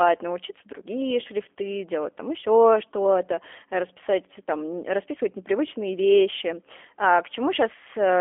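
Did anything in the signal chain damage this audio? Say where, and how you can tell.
Yes. Throughout, the speech sounds thin and slightly rough and synthetic, with nothing above about 3.6 kHz and a 300 Hz to 3.4 kHz telephone band. This is G.729 codec damage at the codec stage, consistent with 8 kbit/s G.729A rebuilding speech from a vocal-tract filter, pitch predictor and sparse pulses.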